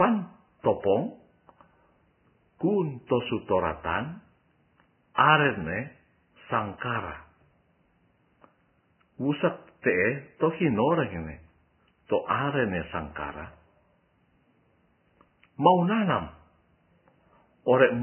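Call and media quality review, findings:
Vorbis compression, throughout: hissy, grainy speech, nothing above 3 kHz, heavy codec damage. Likely a Vorbis encoder starved of bits, consistent with roughly 10 kbps. Low cut-off, treble residue quantised into noise, roughened tones.

Pre-echo, 5.15 to 5.18 s: 35 ms hiss smeared ahead of an attack, onset softened. Transform codec block noise, sized for the loud attack late in the block, spread into the quiet gap before it.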